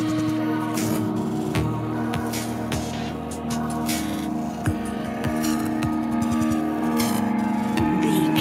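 No technical faults can be heard anywhere in the audio, and the signal stays steady and intact throughout.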